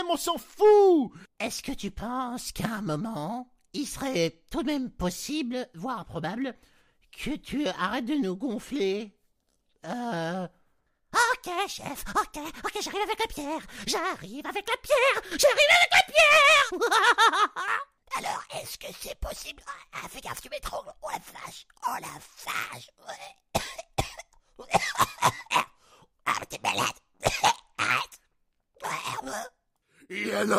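At 15.32 s, lasting to 15.44 s, there is a sudden gain jump: the level steps up by about 9 dB from one sample to the next, with sound and background noise rising together. This is likely a digital gain setting applied without a ramp.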